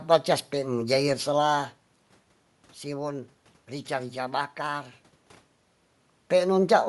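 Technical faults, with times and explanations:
throughout, Bluetooth LC3 compression: the speech carries a grainy, breathy edge up high, where fine detail gives way to noise-like fill. This fits short 7.5 ms frames near 48 kbps, likely LC3. Unlike a plain low-pass, it adds hiss instead of dulling.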